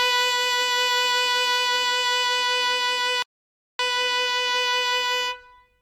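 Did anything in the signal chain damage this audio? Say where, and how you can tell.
Yes: a rebuffering stall at the playback stage. The music drops to silence at 3.22 s and picks up again at 3.79 s exactly where it left off, adding about 0.57 s. The player exhausted its downloaded buffer and halted until more data arrived, losing nothing.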